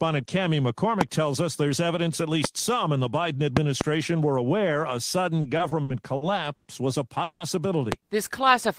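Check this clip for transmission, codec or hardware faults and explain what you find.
Three kinds of fault turn up in the speech: loud pops, a stretch of repeated stalls, and a call audio freeze.

Loud pops occur at 2.44 to 2.47 s (between "us there's evidence at" and "some in the"), at 3.57 to 3.83 s, and at 7.92 to 7.94 s. The likely cause is a sudden voltage step or pulse entering the signal chain from a plug, a switch, static discharge or a driver glitch. The circuitry downstream shapes that pulse into a sharp click or thump peaking roughly 20 dB above the speech, which carries on underneath. The 3.57 s event is a pair of pops in quick succession. The other two are single.

Repeated stalls (stutter) run from 5.41 to 6.67 s, beginning after "were aware a" and ending before "was a". Packets kept arriving late, so the jitter buffer ran dry six times. Each time, the receiver stretched the last sound to cover the wait, 260 ms in all, which is about a fifth of that span. 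The longest gap is 100 ms. Nothing is dropped, but the speech drags and jerks forward unevenly.

A call audio freeze follows "was a", from 7.23 to 7.42 s. The likely cause is a hold-up in packet delivery that emptied the jitter buffer. The receiver first extends the last sound as a fading buzz. Its final 50 ms falls to silence, 170 ms filled in all. Speech then resumes exactly where it stopped, so the freeze inserts a pause and pushes everything after it 170 ms later, without losing content.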